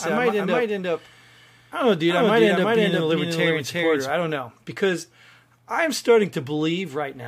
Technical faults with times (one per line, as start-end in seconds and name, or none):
0.00-4.10 doubled audio track